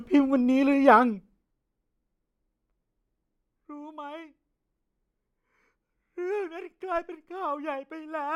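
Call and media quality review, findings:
No audible defects found in the speech clip; no action required.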